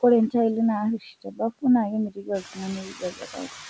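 Noise suppressor artifacts run through the whole clip: the suppressor pulls down about 6 dB in every band it judges to be steady noise, so the background dips between syllables and swells under them, seen on a spectrogram as mottled, flickering patches in the noise floor. Speech cut by the noise suppressor appears three times, at 0.99 to 1.4 s, 2.1 to 2.6 s and 2.82 to 3.53 s, where quieter parts of the speech are mistaken for noise and turned down with it, by as much as about 13, 20 and 17 dB, across roughly a third, a fifth and two fifths of a second. Those stretches sound swallowed and faint, and the waveform shows sudden sags in the envelope. The spectrogram shows the harmonics thinning out. The room noise rises about 10 dB near 2.5 s, and the empty band above 8 kHz fits a wideband call codec such as G.722.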